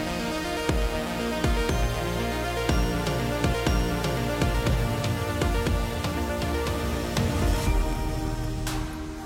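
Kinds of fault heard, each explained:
Stream segment repeated: the player queued the same chunk twice, so about 0.98 s of audio replays from 3.49 s, with a small blip at the jump back.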